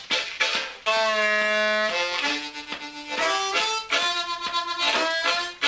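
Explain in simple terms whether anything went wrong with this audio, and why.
One brief gap, from 0.38 to 0.40 s, about 20 ms, where the sound is replaced by a short stretch of steady, hiss-like background noise before it returns. The likely cause is sound dropped by the voice detector: the sending side judged that moment to be background, stopped sending, and the receiver filled in comfort noise. Lost packets would leave a smeared or repeated fragment; here there is only plain filler noise. The call path also removes everything above 8 kHz.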